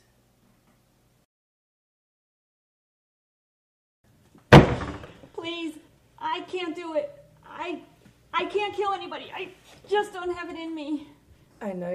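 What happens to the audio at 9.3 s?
Nothing goes wrong at 9.3 s; the audio passes through that moment intact.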